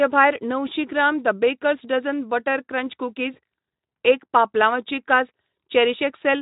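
Just after "बेकर्स डझन बटर क्रंच", from 3.33 to 3.39 s, the speech smears into a brief buzzy, fading tone. This is VoIP packet loss concealed by the speech codec: a 20 ms gap, fitting one lost Speex frame, was filled by extrapolating prior pitch with falling gain.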